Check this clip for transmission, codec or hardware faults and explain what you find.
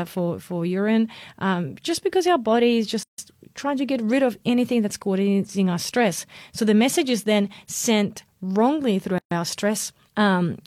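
Two gaps at joins of encoded pieces, about 6 s apart. At 3.03 to 3.18 s, after "because our body is", a 151 ms silence opens before "trying to get rid". At 9.18 to 9.31 s, after "then sent wrongly through", a 130 ms silence follows. The pieces were encoded separately and joined untrimmed, so each keeps its start delay and padded last frame. The speech stops abruptly, with smeared edges, then resumes where it left off.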